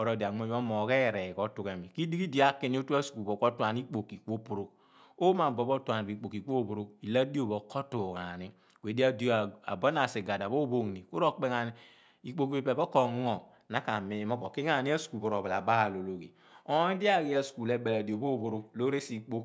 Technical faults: none

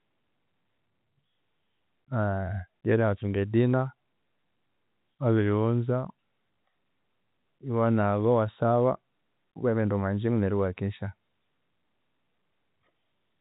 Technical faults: none

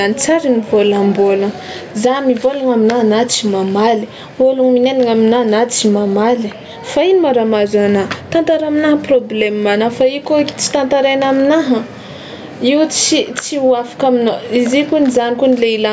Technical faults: gain pumping

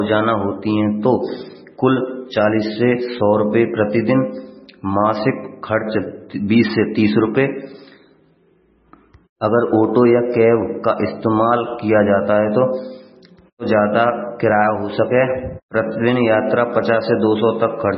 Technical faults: MP3 compression

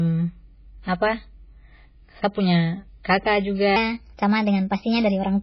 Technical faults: MP3 compression; section at the wrong speed

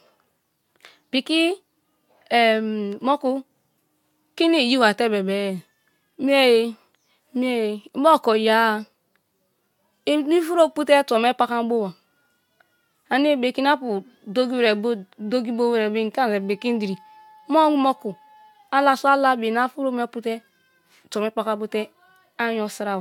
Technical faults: none

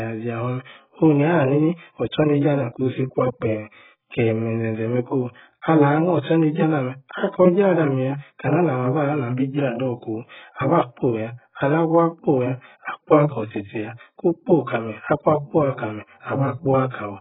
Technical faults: AAC compression; pre-echo

